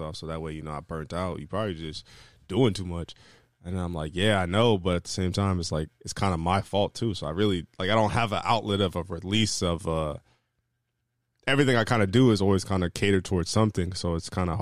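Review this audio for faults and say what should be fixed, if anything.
No faults found; nothing needs fixing.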